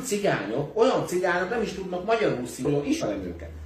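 Around 2.60 to 2.66 s, and again from 2.98 to 3.03 s, there are short glitches from damaged data in the compressed stream. Bad bytes threw the decoder off, so it garbled those frames and had to hunt for the next valid one.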